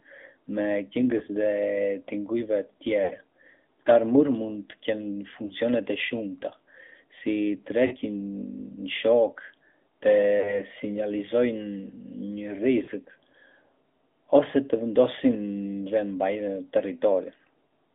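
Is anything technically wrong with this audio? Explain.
Yes, there are two related problems. The whole clip is speech running through the AMR narrowband mobile codec, and on top of that there are six dropouts from lost AMR speech frames.

The codec damage is plainly audible from start to finish. Nothing gets through below about 250 Hz or above 3.5 kHz, so the sound is thin and boxy. The codec rebuilds each frame from a vocal-tract model fed by a handful of pulses. At a rate that fits the 10.2 kbps mode, that leaves the voice a bit buzzy and synthetic.

The lost frames show up at 1.18–1.22, 3.04–3.11, 5.46–5.53 (right before "të shumta"), 7.86–7.95, 10.40–10.60 and 12.84–12.89 s. When a frame is missing, the decoder reuses the last good pitch and vocal-tract settings and lets the gain sag. That gives a short smeared or warbly patch where the sound hangs and dips. The first one fits a single lost frame. 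The 3.04 s event sounds like a run of about three frames, so it stretches a little further toward silence before the voice comes back slightly rough.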